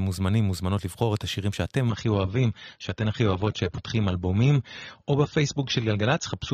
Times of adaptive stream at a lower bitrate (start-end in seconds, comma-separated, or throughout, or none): 1.89-6.53